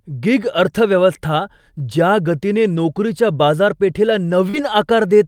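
Right after "गिग अर्थव्यवस्था ज्या गतीने", at 2.75 to 2.77 s, there's a lost packet rebuilt from error correction. That 20 ms stretch fits a single packet that went missing, with the next one carrying a low-bitrate backup copy. The decoder played that copy instead of leaving a hole, so nothing drops out, but the moment sounds a touch rougher and grainier than the speech around it.

At 4.49 to 4.56 s there's a short concealed packet loss of about 40 ms that never arrived in time. The receiver papered over it by extending the last bit of sound, carrying the pitch forward where it was voiced and shaped noise where it wasn't, then crossfading back into real audio. You hear it as a quick smear or wobble.

Overlapping the end of that, at 4.54 to 4.60 s, another 40 ms gets rebuilt from error correction, which points to two lost packets recovered from their backup copies. It's the same rough, slightly noisy texture, just a bit longer, so the two faults together make that spot around 4.5 s sound briefly degraded.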